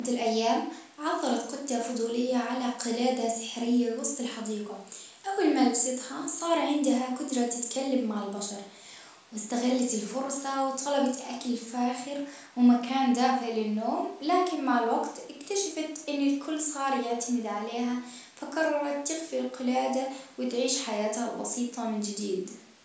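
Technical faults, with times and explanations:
Nothing stood out on listening to this speech, which has been through a call's microphone processing that leaves little above 8 kHz.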